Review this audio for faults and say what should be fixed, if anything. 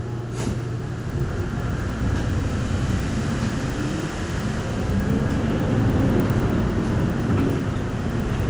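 Resampler restarted on every block, throughout: each roughly 100 ms block was converted in isolation, leaving edge errors heard as ticks at 10 Hz wherever sound is present, consistent with a 24 kHz to 48 kHz conversion. To prevent it, run one continuous resampler whose filter history carries across block boundaries.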